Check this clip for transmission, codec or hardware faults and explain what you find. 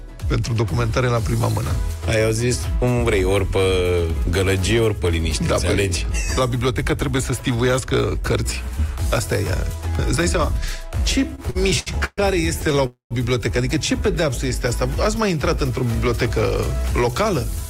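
Two kinds of transmission fault are audible, both close together late in the clip.

Repeated stalls (stutter) occur from 11.35 to 12.20 s and again from 12.62 to 12.78 s. Packets arrived too slowly, so the buffer kept emptying. The first burst has four stretched holds, the longest about 131 ms. The second has five tiny catches, each under 15 ms. The sound drags and judders.

A call audio freeze follows from 12.86 to 13.13 s. The sound holds and fades, then goes silent for about 120 ms before resuming where it stopped. That inserts roughly a quarter-second gap. The likely cause is packets held up in transit, leaving the jitter buffer empty.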